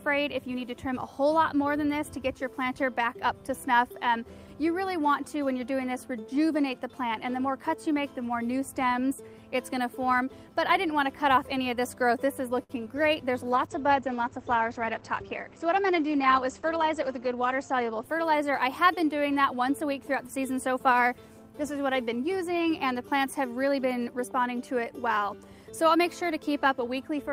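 At 12.63 s a short stall from a late packet holds the sound for 61 ms, to 12.71 s, before it resumes from the same point with nothing lost. On a spectrogram the last harmonic pattern stretches into a flat, smeared band, and the waveform shows repeated, slightly buzzy cycles. Just after, a short concealed packet loss from 12.85 to 12.88 s drops about 20 ms of real audio. The receiver covers the gap with a brief extrapolation and blends back, so the hole is heard as a tiny smear or wobble. A spectrogram would show a thin, blurred vertical slice there, and a short sound could be missing. From 13.44 to 18.89 s a call bitrate drop makes the audio rough and muffled. The sound points to the encoder falling from around 32 to about 11 kbps, with the lowest rate lasting about 4.2 s. The spectrogram shows the upper edge falling from 20 kHz to a hard ceiling at 8 kHz, with coarser, patchier energy below it. 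Inside that stretch, a jitter buffer speed-up from 15.13 to 15.84 s runs the sound about 6% fast at unchanged pitch. The receiver trimmed short pitch-period pieces, removing around 50 ms in total to cut excess buffered delay. In the waveform, cycles are missing at repeated splice points, and the time axis looks slightly compressed.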